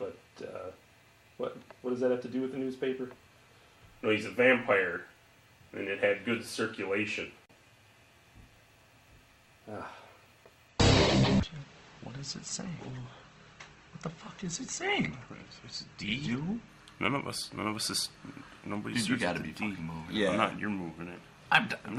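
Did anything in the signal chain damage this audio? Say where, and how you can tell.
Yes, the network and codec stage. From 10.68 to 16.68 s the stream switches to a lower bitrate: everything above 8.2 kHz disappears abruptly, with no gap, and the top turns thin and smeared. That fits the player adapting to a slow connection, consistent with Opus stepping from 64 to 16 kbit/s.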